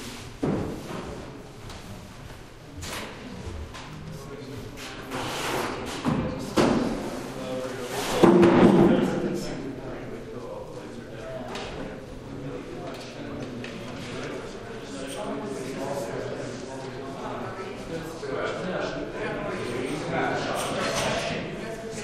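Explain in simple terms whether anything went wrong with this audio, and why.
Nothing went wrong with this recording of sounds: the signal shows no technical problems.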